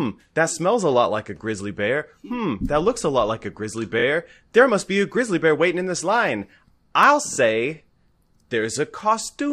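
At 3.98 to 4.03 s, just after "lot like a grizzly", and again at 7.32 to 7.37 s, after "in this line I'll", the speech stutters with repeated frames. A 23.2 ms slice, which fits a single compressed frame, plays two extra times, adding 46.4 ms each time. On a waveform the block appears as identical back-to-back segments.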